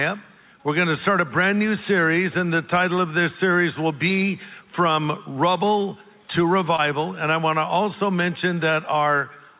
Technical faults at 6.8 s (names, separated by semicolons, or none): short concealed packet loss